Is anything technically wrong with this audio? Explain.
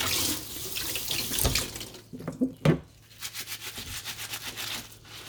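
No, nothing is technically wrong with this audio.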